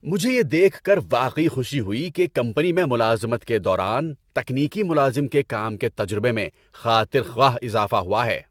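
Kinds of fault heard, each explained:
Generation loss: swirly, hollow, smeared speech with blurred attacks and nothing above 17 kHz, likely from about seven AAC encoding passes near 96 kbit/s.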